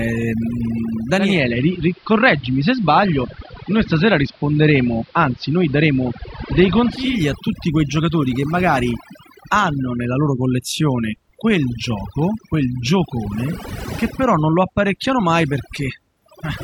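Overdone noise removal affects the whole clip. The noise reduction pulls individual frequency bands far down or off whenever they sit near its noise estimate, so the background breaks up into twinkling, warbling specks, and the quieter parts of the speech are removed along with it.

From 1.12 s to 7.24 s, digital radio blending to analogue occurs. The receiver loses the digital stream and cross-fades over about 0.32 s to the AM broadcast of the same station, then cross-fades back at the end. During the AM stretch, the level shifts by about 2 dB and hiss sits well below the speech.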